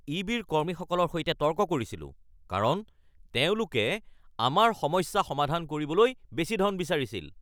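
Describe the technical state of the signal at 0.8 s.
At 0.8 s the speech sits inside a drift correction step running from 0.65 to 1.55 s. Playback runs about 5.8% fast and about 97.5 cents sharp, likely from clock-matching software changing its rate to rebalance a buffer. On a spectrogram the harmonics jump upward by nearly a semitone, then drop back at 1.55 s.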